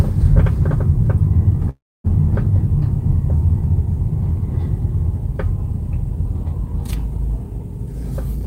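At 1.69 s a call audio freeze begins and runs to 2.06 s. The last bit of sound carries on as a short buzz or hiss that fades out. About 250 ms of that stretch is silence. The likely cause is packets held up in transit until the jitter buffer ran dry. When the audio resumes, it picks up exactly where it stopped. Nothing is lost. The gap simply pushes everything after it about 348 ms later.

From 7.78 s to 8.45 s there is a jitter buffer speed-up. The receiver has more audio queued than it wants. It trims tiny slices of a pitch period or so, again and again, to catch up. Playback runs at about 112% speed with no change in pitch. Roughly a tenth of a second is cut in total, so the everyday sounds here come across as rushed.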